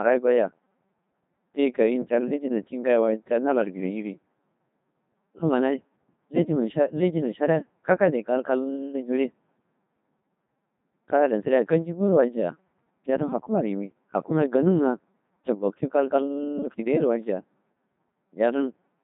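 From start to end, the speech passes through a Codec 2 vocoder. Only pitch, voicing, energy and a rough spectral shape survive. Sine waves rebuild the voice, so it sounds robotic and buzzy. Damage is heavy, consistent with about 2.4 kbit/s. Nothing remains above 3.8 kHz.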